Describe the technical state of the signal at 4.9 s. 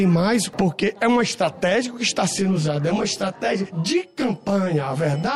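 At 4.9 s, channel delay (comb filtering) is present from 2.39 s to the end. One channel lags by around 20 ms, so the mono sum cancels at evenly spaced frequencies from about 30 Hz upward. The result is a rough, slightly doubled sound whose notches stay fixed rather than sweeping as flanging would.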